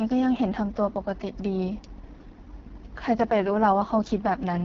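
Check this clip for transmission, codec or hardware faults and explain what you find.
The clip is speech carried through an AMR wideband (HD Voice) codec at a heavily damaging rate.

AMR wideband (HD Voice) codec, throughout: the speech is rebuilt from a pulse-excited vocal tract model, with the top band filled by shaped noise. The harsh, raspy texture fits the lowest 6.6 kbit/s mode. Nothing is audible above 7.5 kHz.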